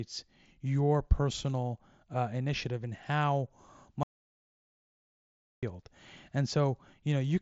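The input feeding the recorder likely dropped out from 4.03 to 5.63 s, and silence was written for about 1.6 s, an audio dropout to silence in this speech clip. After "uh initiative and how" the sound cuts to dead silence with no room tone. The speech is band-limited near 7.7 kHz, as expected through an mSBC Bluetooth headset link.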